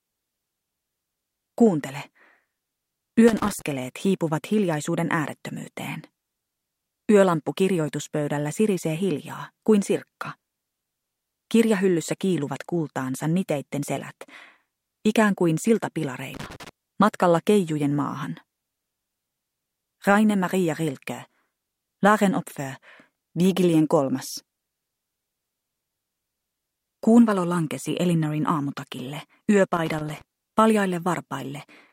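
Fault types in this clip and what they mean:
Loose connector crackle: a worn or dirty contact in the signal path intermittently opens and closes, chopping the signal into rapid fragments that read as an irregular scratchy burst. It occurs three times here, at 3.28 to 3.62 s, 16.34 to 16.69 s and 29.74 to 30.22 s. Each burst lasts roughly a third to half a second, with the last the longest, and the sound is broken up for the duration of each burst.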